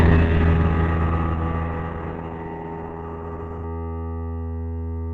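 From 0 to 3.64 s the music plays from an adaptive stream starting at a low bitrate: dull, smeared treble, which fits Opus near 16 kbit/s. The spectrogram's high band then fills abruptly, with no gap, around 64 kbit/s.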